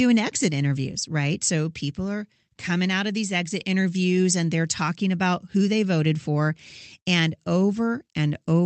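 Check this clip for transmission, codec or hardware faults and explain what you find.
Nothing faulty found: the speech arrives over an ordinary call path whose top end rolls off near 8 kHz, consistent with a wideband Opus link working as intended.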